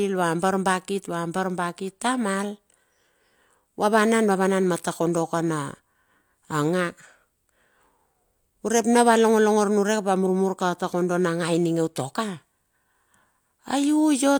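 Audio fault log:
Nothing to log here, as the speech comes across without a single fault worth a line.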